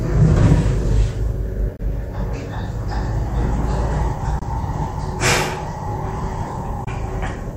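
Sounds cut out three times, at 1.76, 4.39 and 6.84 s, resuming mid-sound after brief gaps of about 40 ms. The likely cause is a Bluetooth dropout, each fitting one lost packet.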